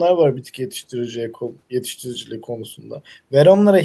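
Speech recording with no audible technical faults.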